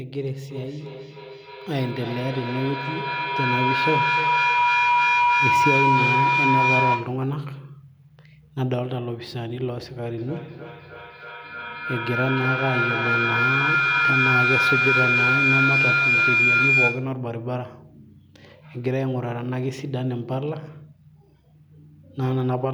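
From 0.5 to 7.29 s a feedback howl builds over the speech: a tone near 1 kHz swells to about 5 dB above the talker, pulsing roughly every third of a second as the microphone-to-loudspeaker loop recirculates and reinforces itself. It returns from 10.18 to 17.22 s, this time near 2 kHz. A spectrogram shows a bright, narrow horizontal line with periodic brightening, and the waveform envelope swells in regular pulses.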